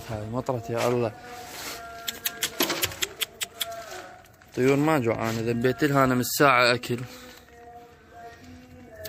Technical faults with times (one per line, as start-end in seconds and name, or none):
1.95-9.08 adaptive stream at a lower bitrate